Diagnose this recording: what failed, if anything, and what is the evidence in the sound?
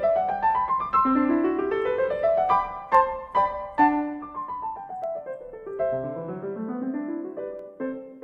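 Dropped samples: sharp clicks in the music at 2.95, 5.04 and 7.59 s. Each skips a fraction of a millisecond, likely in the driver or buffer.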